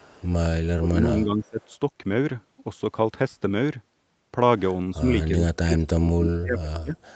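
From 0.00 to 0.27 s, a faint echo leak sits about 30 dB under the speech, 360 ms late. A far-end canceller likely missed its loudspeaker pickup. From 0.77 to 1.6 s, speech suppressed in double talk dips by around 20 dB. An echo canceller likely ducked it while both sides spoke. Another echo leak, about 35 dB down, follows at 1.47 to 1.75 s. From 5.28 to 6.97 s, deeper double-talk suppression, around 35 dB, turns the speech down.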